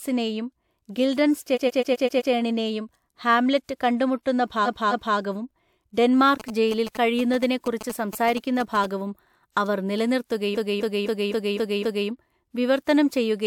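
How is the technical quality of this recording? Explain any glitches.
The recording has two kinds of audible glitch: a stutter that recurs three times, and a stretch of buzzing interference in the middle.

Repeated frames: From 1.54 to 2.30 s, a 128 ms slice of the speech plays six extra times in a row. That is a rapid stutter that adds about 0.77 s. Just after "ഹാംലെറ്റ് കണ്ടുമുട്ടുന്ന", from 4.65 to 5.16 s, a 256 ms slice repeats twice more, adding 0.51 s. From 10.54 to 12.07 s, a 256 ms slice loops six extra times, adding 1.54 s. The cause is a run of compressed frames being written or delivered more than once, so the decoder replays the same piece of audio. The 128 ms block fits a run of three frames, and the 256 ms blocks fit runs of six.

GSM signalling bursts: From 6.40 to 8.86 s, a galloping dit-dit-dit pattern of short buzzes sits roughly 10 dB below the speech. The buzz is pitched near 217 Hz. 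A nearby 2G phone was sending short groups of radio bursts while signalling to its network, and the recording circuit rectified that radio energy into audio at the burst repetition rate.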